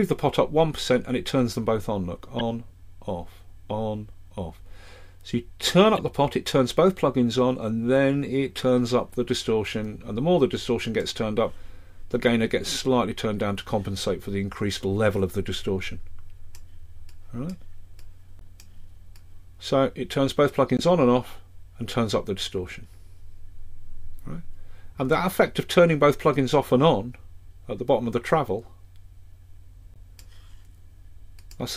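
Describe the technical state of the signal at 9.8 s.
At 9.8 s the signal is intact, with no dropout, distortion, glitch or other technical fault.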